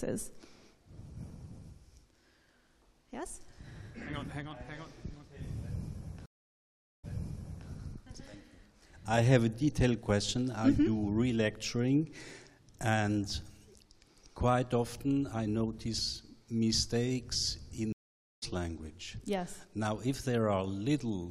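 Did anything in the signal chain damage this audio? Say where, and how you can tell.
Yes, at the network stage: two stream reconnects. At 6.26 s the sound goes silent for 776 ms and resumes 650 ms earlier, repeating material. At 17.92 s a 495 ms gap resumes about half a second later. Unlike packet loss, a fresh decoder fades each restart in.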